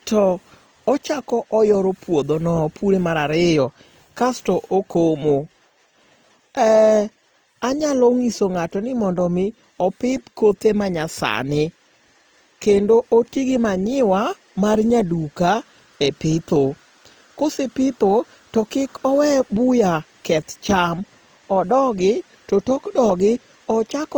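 From start to finish the speech carries plainly audible Opus compression damage, likely from encoding in the codec's CELT music mode at a low rate; the texture fits something around 24 kbps. Short of bits, the encoder preserves each band's energy but fills the detail with folded or noise-like content, so voiced sounds turn rough and grainy. On a spectrogram, harmonics look smeared and speckled, while the full band stays occupied up to a ceiling near 20.2 kHz.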